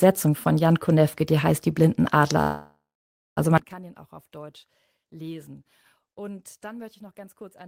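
At 2.41 s the speech stalls into a call audio freeze lasting until 3.39 s. The last sound is carried on and fades, giving way to about 0.56 s of silence. Delayed packets likely emptied the jitter buffer. Speech resumes intact, about 0.95 s late.

From 3.58 s to the end, one channel inverted likely explains the sound. Summed to mono, the centred speech drops by about 24 dB, leaving a faint remnant.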